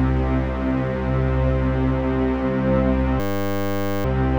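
From 3.2 to 4.05 s there's a system hang loop. The machine stalled while the audio hardware kept replaying the same 10 ms buffer, some 85 times. Because the slice is that short, it comes across as a steady 100 Hz buzz.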